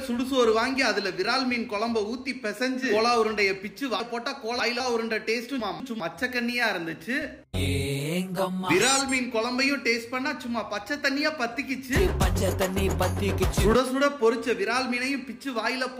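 The audio has two spots with chunks out of order, both working in 200 ms blocks. Between 4.0 and 4.8 s one chunk turns up three chunks late, so a jumbled stretch plays with hard joins at the seams. Then from 5.6 to 6.0 s a chunk lands one position late, giving a shorter scramble. Nothing's missing, just mis-sequenced, which points to blocks being delivered or written to the output in the wrong order.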